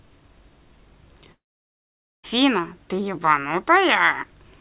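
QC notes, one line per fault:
1.32–2.25 s, long network dropout. The speech breaks off, and the last sound trails on as a short, fading buzz. Then about 0.85 s of near silence follows. Roughly 0.92 s of audio is gone when speech resumes. Likely cause: incoming packets stopped arriving.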